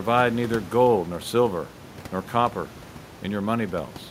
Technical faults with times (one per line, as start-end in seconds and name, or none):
none